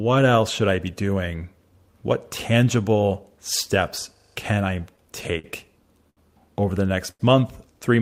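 From 4.16 to 4.36 s the speech turns into a rapid mechanical rattle. This is a system hang loop. The driver or machine stopped feeding new audio, so the sound hardware kept replaying the same 40 ms stretch of its ring buffer, five times over at 25 repeats per second. Unlike a stall, each repeat is an exact copy rather than a stretched or faded continuation, and roughly a fifth of a second of real speech is lost, not delayed.

Just after "steps can", between 4.81 and 5.46 s, come repeated stalls (stutter). Packets kept arriving late, so the jitter buffer emptied five separate times. At each gap the receiver extended the last sound, filling 83 ms in total, about 13% of that span, with the longest hold at 50 ms. Nothing is missing. The speech simply hitches and drags in several small catches, with none of the hang loop's rigid, identical repetition.

Two short stalls from a late packet follow. 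The first runs from 6.10 to 6.19 s, just before "over the", and holds a sound for 70 ms. The second starts just after a later "over the", from 7.11 to 7.22 s, with an 88 ms hold. In each case a single packet missed its slot, and the receiver held the previous sound until it arrived, then resumed exactly where it left off. Each is an isolated drawn-out moment with a faint buzz or dip, not a run of catches.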